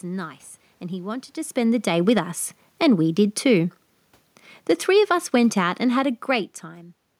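Right after "and he wanted to", from 1.57 to 3.77 s, the automatic gain falling kicks in: the gain control judged the input too loud or too noisy and pulled its gain down by about 4 dB, so the speech and the room noise sink together. It happens again from 4.86 to 6.55 s, by another 4 dB or so.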